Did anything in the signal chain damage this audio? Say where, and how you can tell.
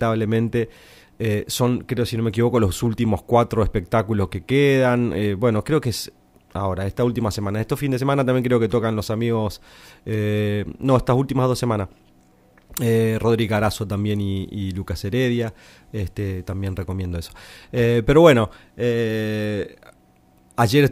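No, nothing in the signal chain damaged this speech.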